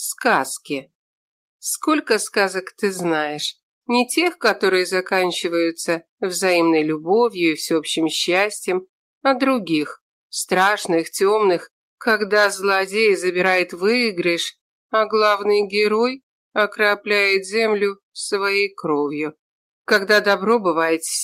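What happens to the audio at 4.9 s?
Nothing goes wrong at 4.9 s; the audio plays through that moment intact, with no dropout, click, glitch or other audible fault.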